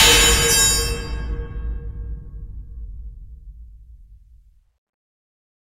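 From the start to about 0.70 s, the signal is driven roughly 12 dB past what one stage in the chain can carry, so every peak in that stretch is sheared off flat: hard clipping. Those squared-off tops generate a spray of harmonics high in the spectrum, and with an overload that large the result is not occasional crackle but a harsh, buzzing fuzz smeared across the loud parts of the opening sound.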